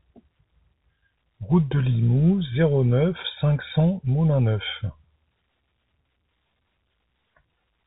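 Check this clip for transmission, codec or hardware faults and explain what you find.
No faults found.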